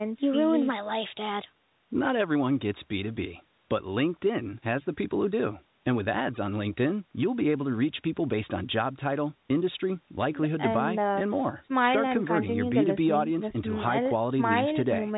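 No technical faults can be heard anywhere in this speech.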